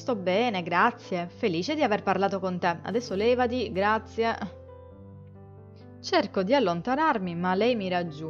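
From 2.09 to 3.83 s a hard, raspy GSM phone buzz sits about 32 dB below the sound. A nearby handset's bursts, at about 217 Hz, are being rectified in the audio circuit. Its intermittent data-transfer pattern and harsh harmonics distinguish it from smoother mains hum.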